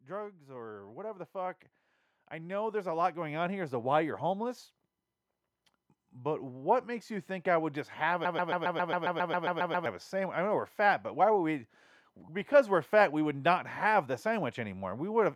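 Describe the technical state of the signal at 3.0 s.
At 3.0 s the level is still climbing: the speech and the background noise behind it swell upward together, a slow rise that runs from 0.06 s to 3.83 s and adds about 13 dB in all. This is automatic gain rising. The automatic gain control judged the incoming signal too quiet and turned its gain up gradually over several seconds, lifting everything in the signal at once rather than the speech alone.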